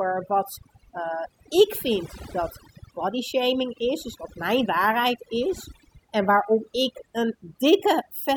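Overdone noise removal runs through the whole clip. A noise reduction stage was pushed too hard on a noisy recording. It cuts individual frequency bands sharply whenever their level sits close to its noise estimate. Quiet parts of the speech fall below that line and vanish with the noise. Between phrases the background drops, broken by twinkling specks.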